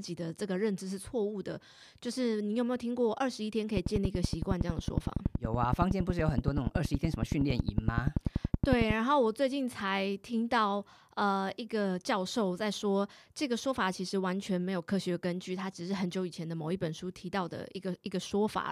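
From 3.77 to 8.91 s, a train of clicks ticks steadily at 10.7 per second, sharp and well above the speech, likely interference; unlike random crackle, every click matches.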